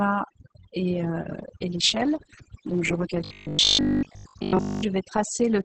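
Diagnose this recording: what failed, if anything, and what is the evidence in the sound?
Call processing first: the overdone noise removal runs through the whole clip. The background collapses to near silence with little twinkling specks. That's a suppressor pushed too hard, gating individual frequency bands whenever they sit close to its noise estimate, so the quieter parts of the speech get carved away along with the hiss.

The codec stage is showing heavy Opus voice compression all the way through. Nothing comes through above 8 kHz, so it's working at wideband, and the speech sounds muffled, hoarse and a bit robotic. That's the SILK linear-prediction path at a starved bitrate, coding the excitation very coarsely. The damage fits something around 10 kbps with 20 ms frames.

From 3.25 to 4.85 s there's robotic sound from repeated short buffers. The speech turns into a stiff, metallic buzz at 50 Hz that still loosely tracks the syllables, and most of that stretch sounds like repeats rather than fresh audio. 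The likely cause is at the driver or buffer stage: audio isn't arriving often enough, so the last 20 ms chunk gets replayed over and over, and that repeat rate sets the fixed pitch.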